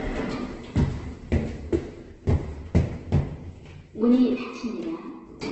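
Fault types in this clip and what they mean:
Opus compression: throughout, the sound is rough and grainy with nothing above 8.2 kHz, likely from Opus music-mode encoding near 12 kbps filling starved bands with noise.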